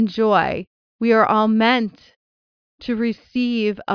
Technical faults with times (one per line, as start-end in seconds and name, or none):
none